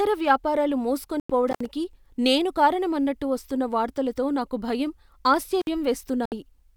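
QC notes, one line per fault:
1.20 to 1.30 s, digital broadcast dropout: the speech mutes for about 96 ms, which fits roughly three lost frames. The receiver stopped getting clean data and held silence until good frames arrived, so that bit of speech is gone.
1.48 to 1.66 s, intermittent contact: a loose connection opens for about 75 ms. It crackles at both edges where the circuit breaks and remakes, with faint hiss in the gap.
5.60 to 5.68 s, intermittent contact: the same loose-plug behaviour, open for about 56 ms. The crackle marks the make and break, and there's low hiss while the line is open.
6.26 to 6.32 s, digital broadcast dropout: a shorter mute of about 64 ms, consistent with two failed frames. The receiver silences until the stream decodes cleanly again, so that speech isn't recoverable.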